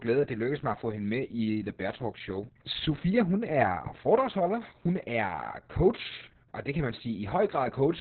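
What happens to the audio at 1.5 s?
At 1.5 s the speech carries heavy Opus voice compression, present across the whole clip. The linear-prediction coder has narrowed the band to about 4 kHz and quantises the excitation coarsely, which fits a rate near 6 kbps. The result is muffled, hoarse, slightly robotic speech.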